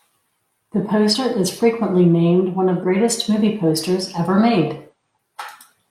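At 1.09 s, 2.80 s (between "frequently named one of" and "movie posters ever") and 4.89 s (after "movie posters ever"), compressed frames are skipped. The audio jumps ahead by roughly one, three and five 42.7 ms frames, about 40, 150 and 200 ms. A spectrogram shows harmonic tracks abruptly shifting position.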